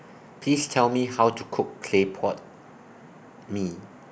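Nothing stood out as a technical problem anywhere in the speech on listening.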